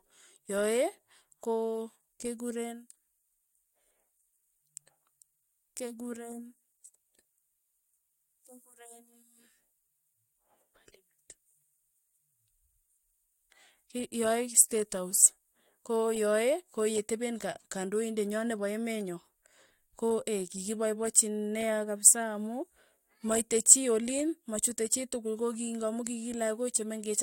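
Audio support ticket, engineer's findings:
No faults found on listening; no action required.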